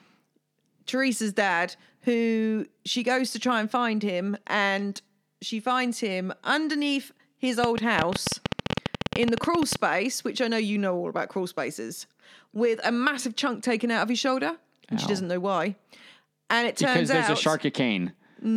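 A train of clicks runs from 7.64 s to 9.76 s, starting just after "finds him underneath his" and ending before "which I know you". Around thirty near-identical pulses arrive at about 13.2 per second, spaced unevenly, each peaking something like 20 dB above the speech. They sound like a sharp, erratic ticking laid over the talker and continuing through the gaps. The likely cause is interference from nearby equipment or a faulty connection or power supply.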